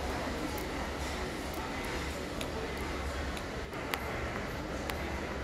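A recording of sounds carries a doubled audio track from start to end: a full-band copy trails about a second behind, roughly 5 dB quieter, with no decay. On a spectrogram every event repeats as a fainter identical shape one second later; the likely cause is a second, slower capture path.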